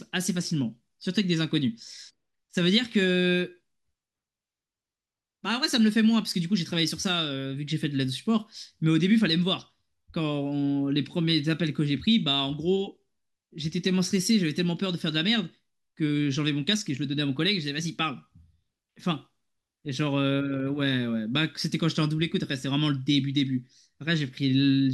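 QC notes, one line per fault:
No fault found.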